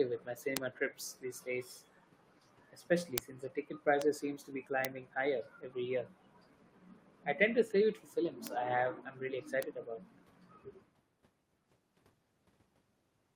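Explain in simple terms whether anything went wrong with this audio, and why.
Twice near the start, a faint repeat of the speaker trails just behind them: from 0.16 to 0.22 s, and more quietly from 0.96 to 1.15 s. It arrives about 0.16 seconds late, like a short ghost of the voice. This is echo leak. The likely cause is that someone on the other end had the call on a loudspeaker, their microphone picked it up, and their echo canceller didn't fully remove it, so a scrap of the speech came back.

Separately, there are six single sharp ticks, at 0.57, 3.18, 4.02, 4.85, 8.47 and 9.63 s. Each is an instant click that has nothing to do with the speech around it. These are bit error spikes. A single digital bit in the stored or transmitted audio flipped, making the signal jump to a wildly wrong value for a tiny fraction of a moment before snapping back, and the ear hears that jump as a click.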